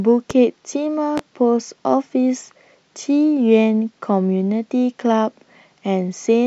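Speech with two loud pops, one at 0.31 to 0.34 s and another at 1.18 to 1.21 s, each a single sharp transient roughly 10 dB above the speech. The speech runs on unbroken beneath them, which sets them apart from dropouts. They are likely a voltage pulse from a plug, switch or static discharge.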